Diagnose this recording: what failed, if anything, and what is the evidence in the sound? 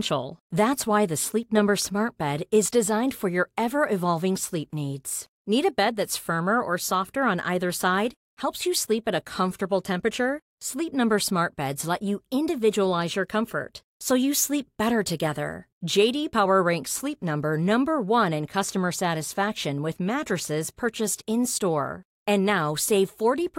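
Nothing failed; no faults present.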